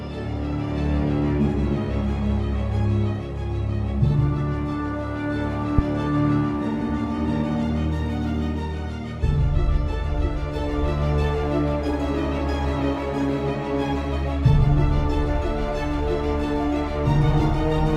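At 5.79 s there's a phantom power thump, running to about 5.98 s. Somebody switched phantom power, or some other supply, on a live input, and that sudden DC step got pushed through the coupling capacitors as a low, heavy bump. It dies away fast, with a decay of about 44 ms, so it's more of a dull knock than a boom. It sits on top of the call-path audio, whose top end stops around 12 kHz, which fits Opus at 32 kbps.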